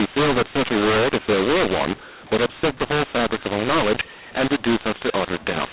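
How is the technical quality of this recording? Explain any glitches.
Poor: the speech is harshly distorted from start to finish by a mu-law and A-law mix-up, layered on the telephone band, which stops at 4 kHz and fits 8 kHz telephone coding. Samples stored with mu-law were decoded as A-law, so levels are scrambled and quiet samples jump well above silence. The speech sounds grating, and pauses hiss. On a waveform, gaps never settle near zero. On a spectrogram, noise fills the whole band up to 4 kHz.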